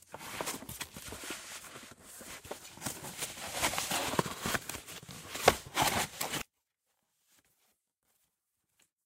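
An everyday sound recording that holds up until 6.42 s, when it suddenly collapses to a faint trace about 36 dB down and stays that way to the end. That's the classic signature of one channel inverted: with one side's polarity likely flipped, everything shared between left and right cancels when the two are summed, so only the small difference between the channels survives.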